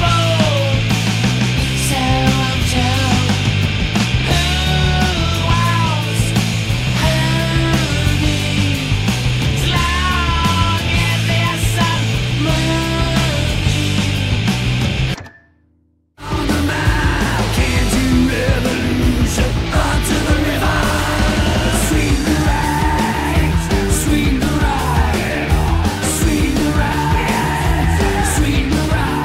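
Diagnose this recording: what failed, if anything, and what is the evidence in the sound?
Nothing failed: no stage in the chain, from capture through conversion, processing, transmission, storage or playback, leaves any audible evidence of a fault.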